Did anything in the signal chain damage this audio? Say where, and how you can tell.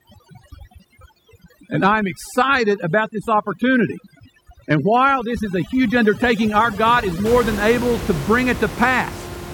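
Yes. Call processing: overdone noise removal, 0.0 to 7.26 s, zeroes bands near its noise estimate; background drops and breaks up, spectrogram showing twinkling specks.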